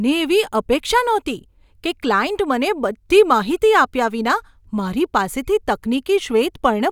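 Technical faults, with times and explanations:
Nothing here to flag; this speech recording has no technical faults worth pointing to.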